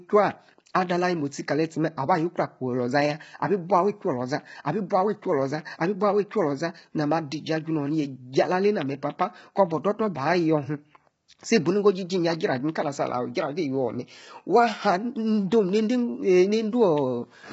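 From start to finish, the speech sounds rough and grainy. A hiss sits between the harmonics of the voice, so vowels lose their clean tonal shape. Nothing is heard above 7.7 kHz, and the top of the band sounds thin and synthetic. The damage is heavy. This points to low-delay AAC compression, likely AAC-ELD at a rate near 16 kbps. Its short frames cannot resolve pitch harmonics well, and too few bits are left to fill them.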